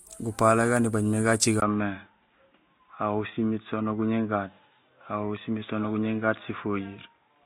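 At 1.6 s the speech goes dull and boxy after a 20 ms gap. Nothing above 3.8 kHz remains to the end. The likely cause is an input switched to a poorer device. Faint new background noise appears. The level stays about the same.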